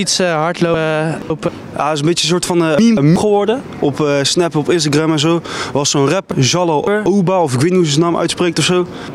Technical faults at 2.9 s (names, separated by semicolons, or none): hard clipping; chunks out of order